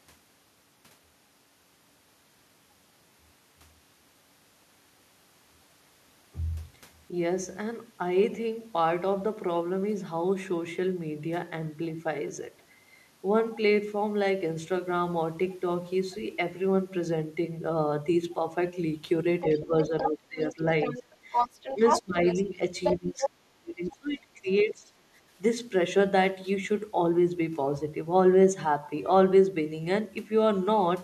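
Other side's voice leaking through is heard in this speech recording from 19.41 to 23.27 s, where a second voice sits about as loud as the talker. That stretch most likely comes from the far end playing on a loudspeaker and the echo canceller failing to strip it from the microphone. Two faint scraps of it, far below the talker, return at 23.9 to 23.96 s and 24.49 to 24.53 s, each short and easy to miss beneath the main voice.

Speech suppressed in double talk overlaps that leak at 19.66 to 20.65 s, 21.76 to 22.17 s and 22.98 to 24.92 s. The talker's level drops in pieces: a moderate dip totalling about half a second in the first, a deeper cut of a fraction of a second in the second, and in the last close to a second and a half of near silence. These drops likely occur because, with both sides talking together, the canceller could not tell the near voice from the echo and turned both down.

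Background gated by the echo canceller shows at 21.08 to 21.18 s, where the room sound drops by about 6 dB for a moment and returns. The canceller clamped the microphone while the loudspeaker played, taking the ambience down with it, then released it.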